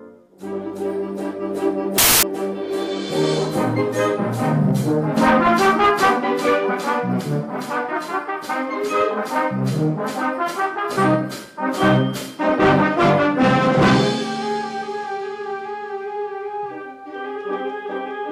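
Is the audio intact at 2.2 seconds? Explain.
No. Samples built from the wrong bytes cover 1.98 to 2.23 s, so 2.2 s falls inside the damage. Over that quarter-second the reader assembles each sample from mismatched bytes, whether shifted by one, swapped in order or misaligned, so the rapidly fluctuating low-order bits end up as the dominant part of every value. The result is loud, harsh broadband noise replacing the sound.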